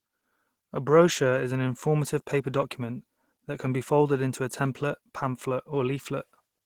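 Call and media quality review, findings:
Opus compression, throughout: speech muffled, hoarse and grainy. Likely a low-rate hybrid-mode encode, fitting about 16 kbps, with band energy kept but fine detail noise-filled.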